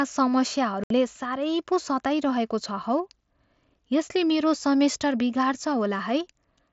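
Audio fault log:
0.84–0.91 s, unconcealed Bluetooth headset packet loss: about 68 ms of speech drops out, replaced by silence or an idle pattern, with hard, abrupt edges, unpatched rather than smoothed over as concealment would.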